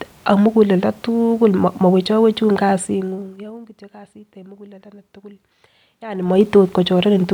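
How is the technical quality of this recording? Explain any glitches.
The recording has two audible glitches, both zipper noise from level changes applied in coarse steps.

Zipper noise, 2.69 to 3.72 s and 6.04 to 6.41 s: the gain moves in 2 dB jumps with no smoothing between them. Each jump leaves a tiny discontinuity in the waveform. The first change drops the speech by about 20 dB at roughly fifteen steps a second, ending just before "kait en mukuleldo". The second raises it by about 20 dB at around forty steps a second. Both are heard as a ticking, zipping texture riding on the voice while the level moves.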